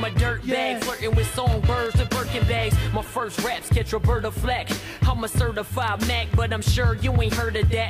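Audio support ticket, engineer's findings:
Corrupt frame decoded, 3.05–3.07 s. Short chirp/noise burst peaking about -20 dBFS, confined to roughly a single frame. Decoder: flipped bits in a compressed frame, played without rejection; misread gains and codes pushed energy into wrong frequency bands for that frame's duration.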